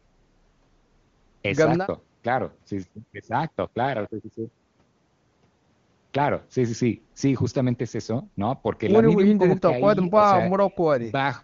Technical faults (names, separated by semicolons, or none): none